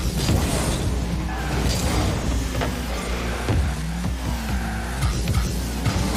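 From the first instant to the end, a steady 60 Hz mains hum runs under the sound, which points to a ground loop or a nearby transformer leaking the power line into the signal path. It sits only a few decibels below the wanted audio, so it is heard as a loud, constant low drone. On a spectrogram it shows as an unbroken horizontal line at 60 Hz with fainter harmonics stacked above; the waveform carries a continuous periodic ripple.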